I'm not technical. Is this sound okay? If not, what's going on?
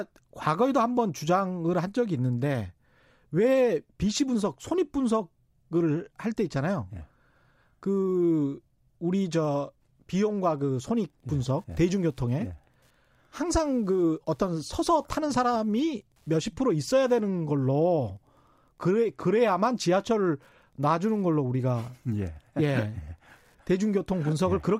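No. From about 10.2 seconds until the end of the speech there is Wi-Fi interference: a faint, steady ticking roughly ten times a second, sitting well below the voice. A Wi-Fi radio close to the recording equipment sends a short signal every 102.4 milliseconds, and the audio circuit picks up each one and turns it into an audible click. Moving the Wi-Fi device away from the audio gear would stop it.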